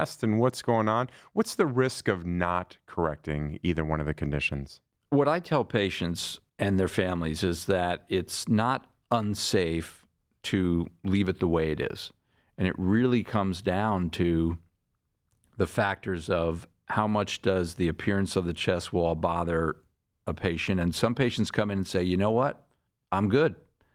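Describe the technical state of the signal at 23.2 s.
At 23.2 s the speech signal is intact, with no dropout, clipping, glitch or other technical fault to be heard.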